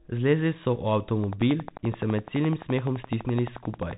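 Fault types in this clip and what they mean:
Bluetooth CVSD headset codec: muffled speech with nothing above 3.8 kHz, scratchy s sounds and granular hiss, as a one-bit adaptive-step encoding at roughly 64 kbps would leave.
Train of clicks: regular ticking about 11.6 times a second from 1.24 to 3.92 s, around thirty clicks up to about 10 dB above the speech, likely from nearby interference.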